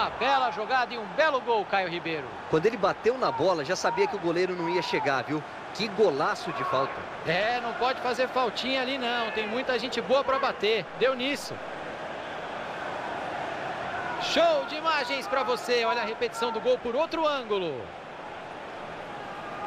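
No technical fault can be heard anywhere in the audio. Nothing in how the sound was captured or reproduced draws attention to itself at any point.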